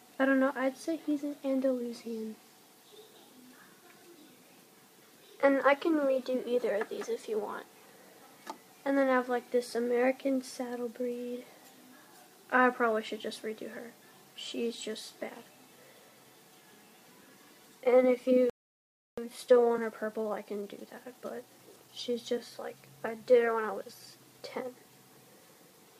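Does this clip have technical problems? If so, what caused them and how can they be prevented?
Yes. A playback stall, likely caused by the player's buffer running dry or its audio thread being blocked, cuts the sound to silence from 18.50 to 19.18 s, a gap of about 0.68 s before it resumes. A larger playback buffer and keeping the audio thread free of blocking work would prevent it.

A time-compressed catch-up follows as the player trims its backlog by removing short slices and cross-fading the joins, so from 19.18 to 22.18 s the sound runs hurried at 1.15 times normal speed, pitch unchanged. Avoiding the stall in the first place, or letting the player resume without compressing its backlog, would prevent it.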